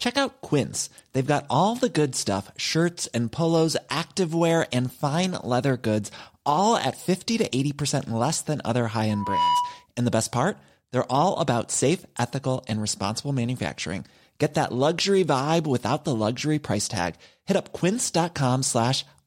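At 9.09 s a loudspeaker feedback squeal sets in: the microphone is picking up the loudspeaker it feeds, and at 983 Hz the loop gain exceeds one, so that frequency reinforces itself on every pass. It is heard as a single steady tone just under 1 kHz that swells over about a third of a second until it sits a few decibels above the speech, then cuts off at 9.86 s.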